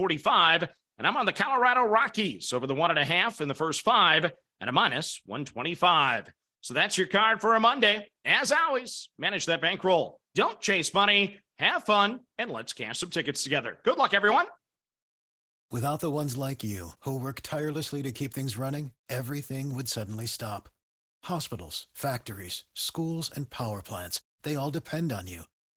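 Opus voice compression runs through the whole clip, with damage that is plainly audible. The speech is coded in hybrid mode: a linear-prediction layer carries everything below 8 kHz, while a transform layer handles the upper band. The coarseness suggests a bitrate around 16 kbps, too few bits for either layer to hold detail. Frames are 20 ms long. The speech sounds hoarse and faintly robotic.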